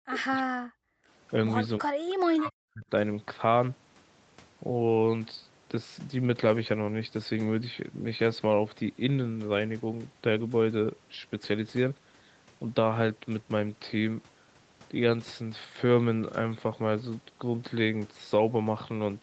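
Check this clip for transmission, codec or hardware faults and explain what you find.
Two faults are audible, both in the first three seconds, against a call path whose content stops at 8 kHz, consistent with Opus at a bandwidth setting that fits 32 kbps.

Speech suppressed in double talk appears at 0.0–0.8 s, 1.8–1.97 s and 2.2–2.85 s. The voice sinks by around 40 dB or breaks up. The likely cause is the echo canceller failing to separate this side's talker from the overlapping loudspeaker echo and ducking everything. On a waveform the envelope collapses to near-flat, and a spectrogram shows the bands fading out together.

An echo leak sits at 2.09–2.15 s. It is a faint, brief copy of the voice arriving 316 ms late, roughly 25 dB below the speech. This is likely residual loudspeaker pickup that escaped cancellation. On a spectrogram it looks like a weak, shifted ghost of earlier harmonics. 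The waveform shows only a tiny bump.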